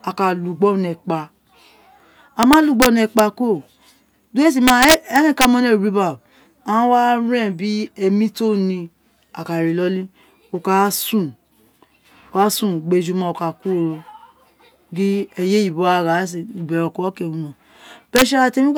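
Violent, sharp cracks break up the loud peaks of this speech at 2.43 to 3.19 s, 4.68 to 5.45 s and 18.16 to 18.22 s. This is integer overflow: with gain about 2 dB too high, peaks exceed the maximum integer and wrap to the opposite sign instead of being limited.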